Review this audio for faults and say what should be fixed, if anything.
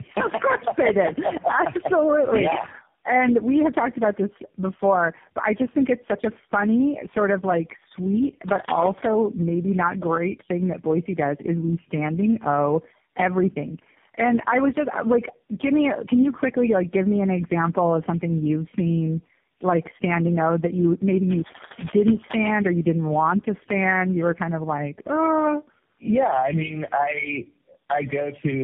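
Tandem speech coding runs throughout. The speech has been decoded and re-encoded by about four speech codecs in a row, each degrading the last one's output. Nothing is left above 3.4 kHz, and the sound is rougher and more warbly than a single low-rate coder would make it. Keep the call in one codec end to end, or pass it through transcoder-free.

Cable scratch noise comes as dense, uneven rustling at 8.48–9.11 s, after "sort of like sweet", about as loud as the speech. It returns at 21.28–22.53 s, after "that you maybe", about 10 dB lower. Unlike codec artefacts, it sits on top of the speech in bursts, which points to a likely worn cable or connector being moved. Replace or reseat that cable.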